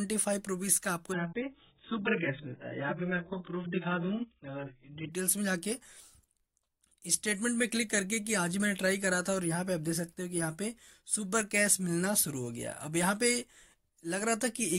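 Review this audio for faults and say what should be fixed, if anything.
An adaptive stream at a lower bitrate played from 1.12 to 5.12 s. The player switched to a far leaner encode, which fits a drop from roughly 96 kbit/s AAC to about 8 kbit/s. Everything above 3.8 kHz disappears abruptly and codec artefacts rise, with no gap at either switch. A deeper playback buffer or a floor on how far the player may step down would keep that stretch at full quality.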